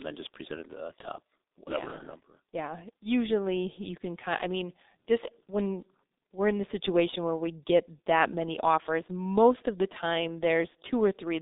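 Speech runs through the G.723.1 codec for its whole length, and the damage is heavy. Nothing reaches above 3.7 kHz or below about 250 Hz, so the sound is muffled and thin. The hoarse, smeared consonants set it apart from simple telephone band-limiting. The codec rebuilds the voice from a coarse model refreshed only every 30 ms frame, which fits a bitrate around 6 kbit/s, and fast articulation blurs between those updates.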